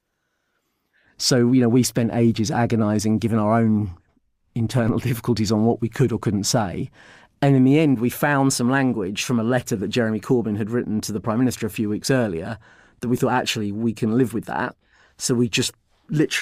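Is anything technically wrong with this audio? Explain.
Yes. At 4.88 s the speech carries a DC step: the waveform's zero line jumps abruptly by about -26 dBFS, the kind of shift produced when a converter recalibrates or an offset input is switched into the path. The offset doesn't hold; it bleeds away through a high-pass at 5 Hz, so the baseline drifts back toward zero. The sudden jump is heard as a single low thump or click, while the speech itself continues unchanged.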